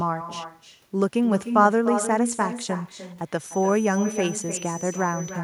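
Right from the start there's echo with no canceller. Every bit of the speech comes back roughly a third of a second later, sitting about 9 dB under the original and sounding thinner. What's happening is the far end is playing the call out of a loudspeaker, their mic picks it up, and nothing on that side strips it out, so your own voice rides the network round trip and lands back on top of itself.

From 3.35 s through to the end, a thin, steady feedback whistle creeps in at 6 kHz, sitting well below the speech, something like 20 dB down, and swelling and fading slowly in level as it goes. It doesn't grow or run away. The likely cause is a loudspeaker-to-mic loop drifting right up to the edge of feedback, where a single high frequency hangs on without tipping over into a full howl.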